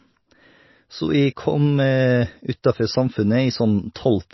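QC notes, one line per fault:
throughout, MP3 compression: likely a low-bitrate MP3 encode, around 24 kbps, cutting everything above 5.8 kHz, so the speech sounds dull, watery and plainly swirly.
3.94 s, pre-echo: quantisation noise spread across a transform block reaches 16 ms ahead of a sharp attack, putting a brief hiss before it and softening its onset.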